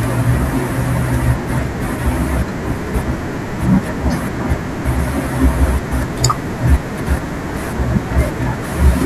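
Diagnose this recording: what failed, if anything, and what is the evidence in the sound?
Hard clipping at 6.25 s: a brief crackle on a speech peak, about 8 dB over full scale. The stage, likely the converter or a fixed-point gain step, cut the waveform flat, and the squared-off top sprays harmonics high into the spectrum, heard as that single click.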